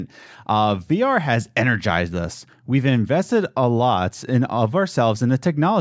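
Nothing stood out on listening to this speech recording.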